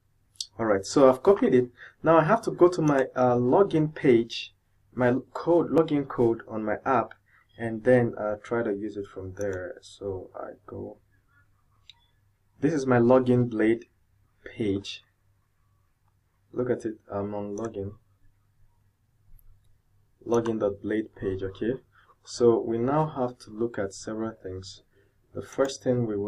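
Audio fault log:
5.78, 11.77, 17.75 and 23.74 s: audio missing between chunks. The recorder or processing chain likely works in blocks of about 6 seconds and drops a very short slice of input each time it closes one block and starts the next. The audio on either side is butted together with no gap, so each boundary is heard as a tiny, abrupt skip forward, recurring at a steady rate of about one every 6 seconds.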